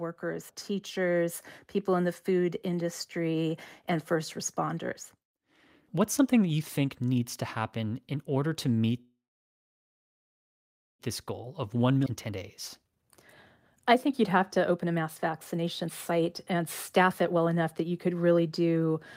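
From 0.2 to 5.09 s the level climbs steadily by about 5 dB. This is automatic gain rising: the gain control judged the input too quiet and raised its gain slowly over nearly five seconds. Because the gain acts on the whole signal, the speech and the background noise swell together, with no change in the balance between them.

At 9.01 s, right after "happen in order to", a call audio freeze begins and lasts until 11.01 s. The last sound carries on briefly as a fading buzz or hiss, and then about 1.8 s of silence follows. Playback then resumes exactly where it stopped, so nothing is lost and the audio simply falls about 2 s later. The likely cause is packets held up in transit that left the jitter buffer empty.

The receiver then works off that backlog. A jitter buffer speed-up runs from 11.09 to 12.37 s at about 111% speed, cutting roughly 0.15 s. The receiver removes many short pitch-period slices, so the speech sounds hurried while its pitch stays the same.

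Inside that stretch, at 12.05 to 12.08 s, there is a skip ahead. About a second of audio is dropped, and the two sides of the jump are joined almost directly, with only a tiny gap.

Two more jitter buffer speed-ups follow. From 12.79 to 13.10 s the audio runs at about 174%, removing roughly 0.2 s, and this burst sounds distinctly rushed. From 13.94 to 18.61 s it runs at about 116%, removing roughly 0.7 s, which gives a longer hurried stretch at normal pitch.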